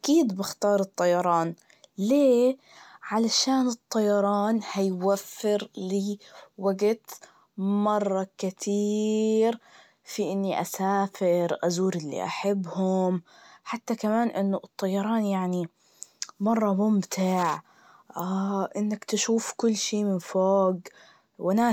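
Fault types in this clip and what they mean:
No technical faults can be heard in this recording.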